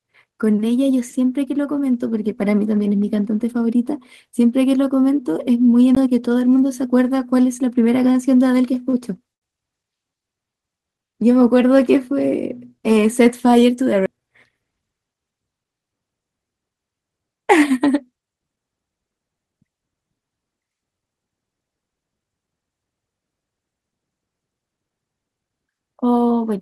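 At 5.95 s there's a CD skip: a brief mute of around 15 ms with a tick, then the speech jumps to a different spot, as if the laser got knocked onto another turn of the disc's spiral and picked up a fraction of a second away. A second, smaller CD skip hits at 14.06 s, with only a few milliseconds of silence, so it's more of a tiny click with the same sudden lurch in the speech.

From 8.12 s to 8.94 s there are repeated stalls, a stutter. Packets were arriving late or too slowly, so the jitter buffer kept running dry, four times in that stretch. Each time the receiver held the last bit of sound until data showed up, 82 ms of filler in total, with the longest hold 38 ms. Nothing gets lost, but the speech drags and hiccups for a bit under a second.

Right after, from 9.34 s to 9.43 s, there's a short stall from a late packet. One packet missed its slot, the buffer emptied, and the receiver stretched the previous sound for 77 ms before carrying on from exactly where it left off. 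You hear one sound held unnaturally long, with a faint buzzy or dipping quality, and that pushes the delay up by the same 77 ms.

Then there are two jitter buffer speed-ups, where the buffer had built up more audio than it wanted and trimmed tiny pitch-period-sized chunks to catch up. From 13.03 s to 13.94 s the speech runs at 106% with about 50 ms shaved off, so it sounds slightly hurried at the same pitch. From 19.43 s to 19.68 s it's a sharper 113% with about 40 ms removed, so that short burst sounds noticeably rushed. Underneath all of this, the audio has the band-limited, lightly coded sound of a call codec topping out around 12 kHz, which fits Opus at a modest bitrate.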